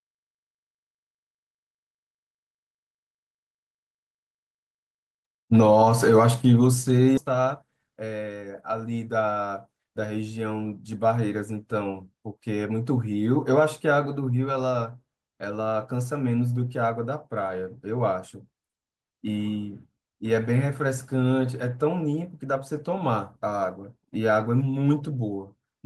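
At 7.17 s the speech skips ahead: about a third of a second was discarded while later audio was already queued, so the two sides join abruptly with no gap. From 7.26 to 8.73 s a jitter buffer speed-up trims short pitch-period segments to drain excess delay, running speech at 111% speed, same pitch, sounding rushed.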